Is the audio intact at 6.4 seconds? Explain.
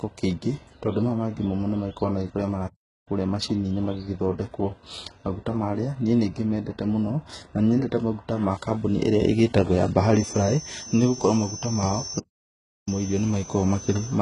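No. At 6.4 s, as throughout the speech, the sound shows heavy damage that likely comes from HE-AAC compression at a very low bitrate, around 12 kbps. Above the coded band, treble is rebuilt from copied lower bands, cutting off at 11 kHz. Unlike a plain low-pass, it stays bright, but s sounds come out gritty and metallic rather than dull.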